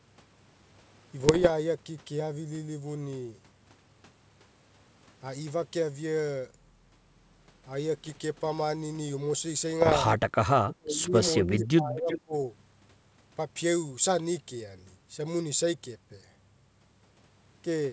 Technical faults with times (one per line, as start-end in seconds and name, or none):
1.19-1.51 bit errors on an ADPCM link
8.04-8.22 bit errors on an ADPCM link
9.81-9.97 bit errors on an ADPCM link
10.64-12.33 speech suppressed in double talk
12.08-12.21 echo leak